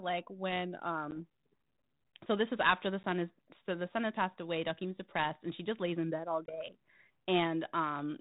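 Speech carried over G.726 ADPCM at 32 kbit/s shows packet loss on an ADPCM call at 1.11–1.22 s, at 3.03 s between "this is after the" and "is so the son", and at 6.46–6.57 s after "lays in bed all". Each event opens with a hard-edged gap of 10, 10 and 20 ms, then a stretch of mild distortion while the decoder's predictor and step size recover. On a waveform the gap is a sharp-cut flat line, and on a spectrogram it is a vertical blank stripe.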